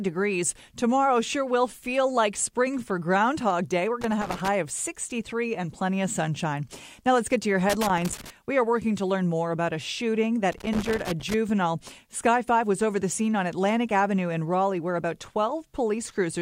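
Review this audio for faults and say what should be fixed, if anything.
Irregular scratchy crackle bursts at 4.01–4.48 s, 7.70–8.30 s after "let's get to your", and 10.52–11.34 s after "more about a shooting": loose connector crackle, a worn contact chopping the signal. Clean or replace the connector and strain-relieve the cable so it cannot shift.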